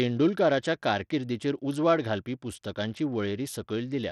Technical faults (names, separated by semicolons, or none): Bluetooth SBC compression